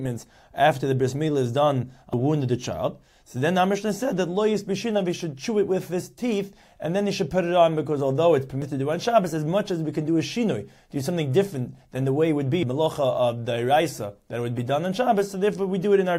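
Likely dropped buffers (overrun), with samples overwritten before being read, remove roughly 0.15, 0.1 and 0.3 s at 2.13, 8.62 and 12.63 s. Each is heard as the sound jumping ahead.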